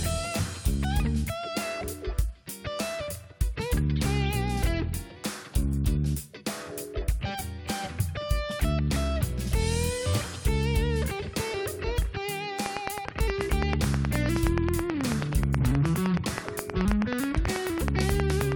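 From 12.66 s to 18.53 s, something outside the audio, likely interference from nearby equipment or a faulty connection or power supply, injects a steady pulse into the signal, producing a train of clicks. The pulses arrive at a regular 9.39 per second, around fifty in all, each with much the same shape and peaking roughly 15 dB above the programme. The result is an even, mechanical ticking laid over the sound that continues through the pauses right up to the end.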